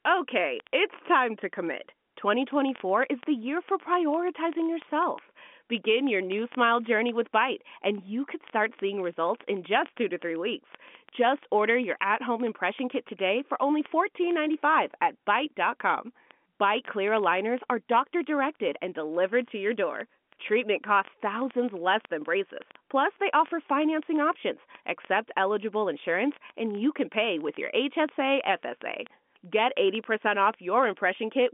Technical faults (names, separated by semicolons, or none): word clock ticks